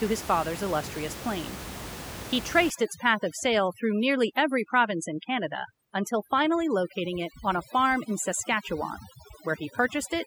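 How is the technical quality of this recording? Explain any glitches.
The recording is marred by overdone noise removal from 2.70 s to the end. The background, room noise sitting about 13 dB below the speech before that point, collapses into near silence flecked with twinkling specks. An over-aggressive noise reducer is switching individual frequency bands down whenever they resemble its noise estimate, taking quiet speech detail along. Unlike codec artefacts, the damage tracks the noise floor rather than the loud content.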